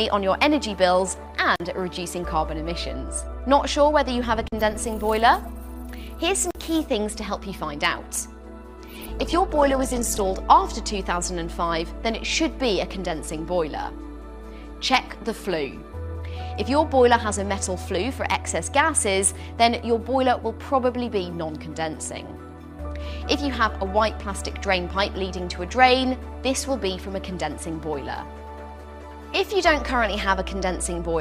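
At 1.56, 4.48 and 6.51 s the sound drops out in three blocks of digital silence, each about 43 ms, which fits a 2048-sample buffer left unfilled in time. Each hole is a short gap. On the waveform it is a flat line with abrupt edges, and on the spectrogram a blank vertical stripe with broadband lines at its boundaries.

From 8.85 to 10.45 s a call bitrate drop makes the sound rough and muffled. The character suggests the encoder falling from around 48 to around 11 kbps. On the spectrogram the upper band is missing for about 1.5 s and the remaining detail looks coarse and smeared until full bandwidth returns.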